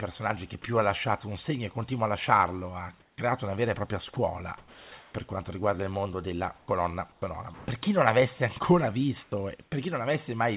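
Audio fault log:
3.0–3.18 s, 4.14–5.14 s, 9.24–9.72 s: comfort noise in place of the background. In the gaps after "continua a lasciarlo ha", after "una vera e propria" and after "chi non avesse ancora", the room tone becomes a steady, featureless hiss. In the first gap it is about 3 dB quieter. The sender likely stopped transmitting during pauses, and the receiver filled them with synthetic noise.
3.16 s and 9.3 s: onset clipped by the voice detector. Speech resumes abruptly, with about 20 ms missing from its soft beginning: before "una vera e propria" and shortly after "chi non avesse ancora". The detector was likely late to register the restart, so comfort noise covered those first milliseconds.
4.14 s: sound dropped by the voice detector. About 20 ms of the tail of "una vera e propria" gives way to steady noise. The detector likely mistook that quiet ending for background and halted transmission early.
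6.58–7.68 s: sound chopped by the voice detector. Over this 1.1 s stretch, about 340 ms in total is swapped for comfort noise. The speech has two or more holes. The detector was likely toggling repeatedly.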